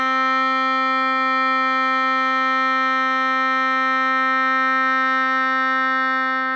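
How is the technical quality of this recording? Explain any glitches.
No glitches can be heard anywhere in this music recording. There is nothing in the audio that needs explaining.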